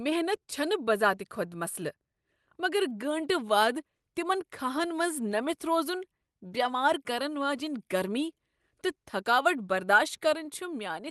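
Right from the start there's clock drift between sender and receiver: the sender's clock runs slow, by something like one and a half percent. The receiver's jitter buffer keeps draining as a result, because audio arrives a little slower than it's being played out. Nothing dramatic happens at any one moment. It's a steady mismatch sitting underneath the whole clip, and it's what forces the fixes that follow.

Those fixes are the repeated timing corrections, running from about 0.39 s to 10.92 s. To keep from running dry, the receiver keeps repeating short slivers of audio, always stretching and never cutting. They're spaced unevenly. Altogether they add somewhere around a fifth of a second, and the speech plays back at about 98% of its pace. If you hear them at all, it's as small hiccups and a slightly wobbly, dragging tempo.

The Opus call path comes through as expected. Top end is cut off at 12 kHz, and the coding texture fits a modest bitrate, roughly 32 kbps.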